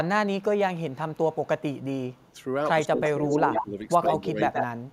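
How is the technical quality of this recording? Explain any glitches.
The recording has clear technical problems: the speech is repeatedly followed by its own delayed copy, and it gets pushed down while both sides talk.

Echo leak, 0.9 to 2.32 s: a very faint copy of the speech trails about 154 ms behind, roughly 40 dB down, likely a loudspeaker echo the far end's canceller missed.

Echo leak, 3.04 to 3.66 s, around 4.05 s, and 4.53 s to the end: a much stronger copy sits 125 ms behind, about 5 dB below the speech and briefly as loud as it, again likely leaked loudspeaker pickup.

Speech suppressed in double talk, 2.84 to 4.41 s: the speech dips by as much as about 15 dB over roughly a second, likely because the echo canceller, unable to separate talker from echo, turned both down.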